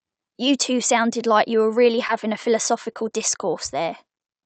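Short concealed packet loss occurs at 2.07 to 2.11 s and again at 2.93 to 2.97 s. Each time about 20 ms of the speech arrived too late, and the receiver bridged the gap by extending the preceding sound before blending back into the real signal. This is heard as a brief smear or wobble.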